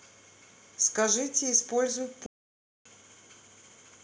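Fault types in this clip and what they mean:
Playback stall, 2.26 to 2.86 s: the speech cuts out mid-flow and the output sits silent for about 0.59 s before resuming. This is likely the player running short of data or its audio thread being blocked, leaving nothing to play until it recovered.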